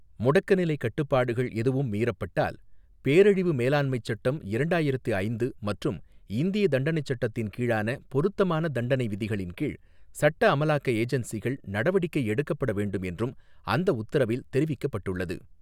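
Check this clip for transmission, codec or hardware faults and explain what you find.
I found no faults to explain in this clip.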